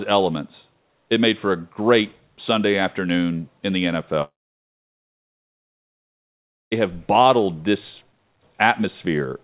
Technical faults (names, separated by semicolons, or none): long network dropout